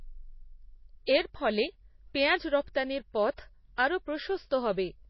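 Speech, and the whole thing has that thin, watery quality of heavy MP3 compression, which is the likely cause. There's nothing at all above about 5.8 kHz, so the encoder has simply cut off the treble, and the remaining detail swirls as quieter frequency lines drop in and out from frame to frame. The damage is plainly audible, and that hard ceiling plus the swirl points to a very low bitrate, something around 24 kbps. Listen around 3.76 s for a pre-echo: a short smear of hiss, about 17 ms, arriving just ahead of a sharp attack. That's the codec spreading its quantisation noise across the whole block, so noise meant to hide under the loud onset spills into the quiet moment before it and softens the attack.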